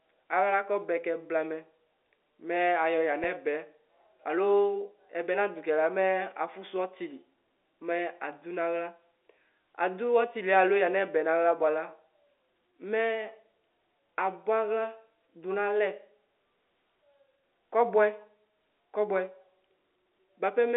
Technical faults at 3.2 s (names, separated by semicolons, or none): packet loss with pitch repetition